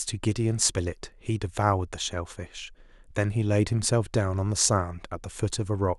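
There are no technical faults to describe at any point in the speech.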